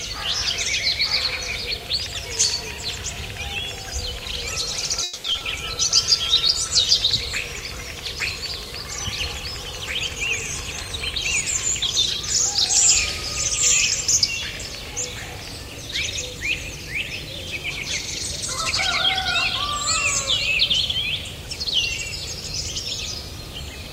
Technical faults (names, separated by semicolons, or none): call audio freeze; short concealed packet loss; call bitrate drop; jitter buffer speed-up